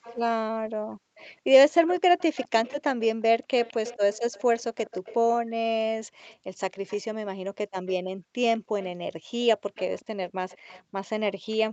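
Right at the start, from 0.02 to 0.19 s, and again from 1.17 to 5.17 s and 6.28 s to the end, there's a faint second copy of the speech trailing the original by about 205 ms, sitting roughly 20 dB under it. That's an echo leak: most likely the far end is on a loudspeaker and its echo canceller let some of what its mic picked up slip back down the line. It's quiet, a delayed shadow behind the speech.

The other issue is background gated by the echo canceller. At 0.5 to 1.17 s, 3.34 to 3.5 s, 5.41 to 6.27 s, 8.16 to 8.71 s, and from 10.83 s to the end, the room tone suddenly drops by up to about 40 dB and then comes back. The canceller clamped down on the mic while the speaker was playing. You hear it as short stretches where the ambience goes dead, cutting across the 8 kHz-wide call band.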